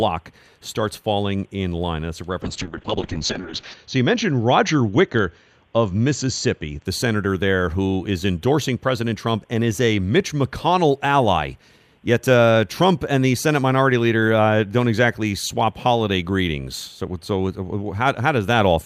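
From 2.46 s to 6.91 s the speech suffers a call bitrate drop, recovering just before "senator there who is". The call's bandwidth estimate fell and the encoder was forced onto far fewer bits. The coarse coding fits a fall from about 64 kbps to about 6 kbps. Audio bandwidth narrows from 20 kHz to 8 kHz, so the speech sounds muffled and rough. It is worst for about 1.3 s, then quality climbs back.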